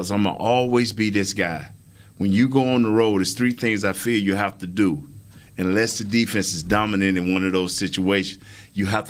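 Nothing in this speech clip stands out as a technical fault, and the Opus voice compression on it only leaves the sort of light coding trace you'd expect from a full-band hybrid setting.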